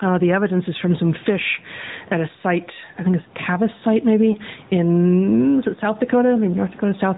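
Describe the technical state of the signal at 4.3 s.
At 4.32 to 4.36 s a lost AMR speech frame leaves a brief dip and warble lasting one 20 ms frame. The frame failed its error check, so the decoder reused the previous pitch and vocal tract settings at falling gain. Unlike a hard dropout, this produces a smeared, weakened continuation rather than a clean gap.

Throughout, including this moment, the AMR narrowband mobile codec at 10.2 kbps plainly colours the sound with a buzzy, synthetic texture and nothing above 4 kHz. This codec dulling is constant, not a momentary event like the lost frame.

Gain pumping is also present throughout. The level swings by roughly 10 dB. The likely cause is a fast limiter or compressor reacting to gain set too high. The room noise itself is normal background.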